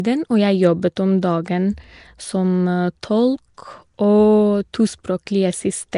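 From start to finish, the speech carries a rough, hissy halo and a smeared, underwater quality. Nothing sounds above 10.6 kHz. The likely cause is Nellymoser compression, the old Flash microphone codec. It codes short blocks with a fixed, small bit budget. Weak bands get no bits and are filled with noise, which makes the hiss. The damage is plainly audible, and fits a rate around 44 kbps.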